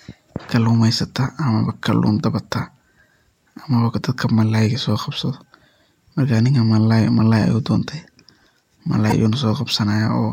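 Damaged data in a compressed stream hits this speech clip from 9.08 to 9.12 s: corrupted bytes derail the decoder, which loses frame sync and produces a brief glitch before recovering.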